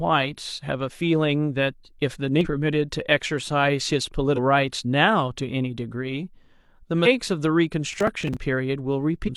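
Around 2.41, 4.33 and 7.02 s, then again at 9.24 s, you get short blips of about 50 ms each, which is damaged data in a compressed stream. Corrupted frames throw the decoder off sync, so it loses its place while hunting for the next header. Between 7.93 and 8.37 s there's a gritty tearing burst, which is processor overload crackle. Roughly ten buffers of around 10 ms each missed their deadlines, and each gap got filled with a repeat of old audio with hard edges.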